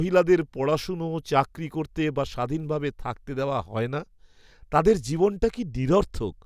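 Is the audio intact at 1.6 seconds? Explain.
Yes, the speech at 1.6 seconds plays through cleanly, with no dropout, click, distortion or other technical fault at that moment.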